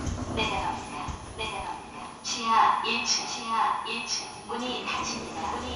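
From the very start and for the whole clip, the sound carries a doubled audio track: a second full-band copy of everything trails the original by about one second, sitting a few decibels lower, around 5 dB down. Unlike an echo or room reverb, the repeat has no decay tail and no added room colour. It is one clean duplicate at a fixed lag, most likely from the same audio being captured twice through a slower path or from two copies held out of step in an edit.

Throughout the clip there is also plainly audible MP2 compression. Nothing sounds above 12.8 kHz, which gives the audio a dull, capped top. Below that the sound has a gurgling, granular roughness, and upper bands flicker in and out as the encoder starves them of bits. That band-by-band switching sets it apart from a simple low-pass filter or the smeared pre-echo of MP3. The damage level fits a low bitrate of around 80 kbps, likely from MPEG Layer II encoding of the kind heard on low-rate digital radio.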